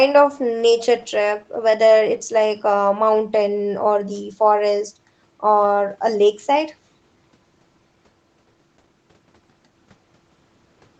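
No technical faults can be heard in this speech clip. It has the sound of a normal call path, with the lowest bass trimmed by the microphone processing and nothing above 8 kHz, which fits an Opus codec running at a wideband setting.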